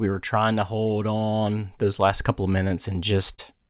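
Short concealed packet loss occurs twice. The first is from 2.68 to 2.72 s, just after "those last couple of". About 20 ms of audio failed to arrive in time. The receiver covered the gap by extending the preceding sound, then blended back into the real signal. It is heard as a brief smear. The second, from 3.34 to 3.40 s, fills about 40 ms the same way and produces a similar wobble. The call path's narrow band, with nothing above 4 kHz, points to G.711 A-law at 64 kbps.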